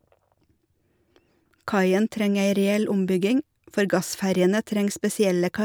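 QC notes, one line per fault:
No technical faults are audible anywhere in this speech recording.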